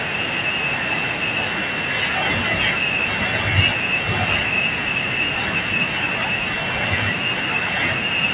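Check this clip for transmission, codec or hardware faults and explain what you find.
Nothing faulty can be heard in this speech.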